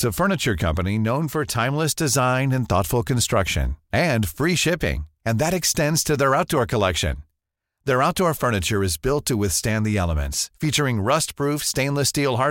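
Nothing in the recording stands out as a technical problem; I listened through and didn't catch anything worth flagging.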